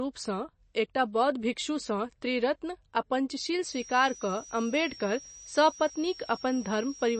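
Throughout the clip, the speech was likely squeezed through MP3 compression at a very low bitrate, consistent with about 32 kbps. The encoder discards everything above 8.3 kHz, so the speech sounds dull, and clearly audible watery, swirling artefacts appear as weak frequency content flickers in and out.

From 3.63 s to the end, a switching power supply bleeds into the audio path, producing a switching supply whistle. It is a thin, high tone, wandering between about 5.5 and 5.9 kHz, sitting roughly 20 dB below the speech.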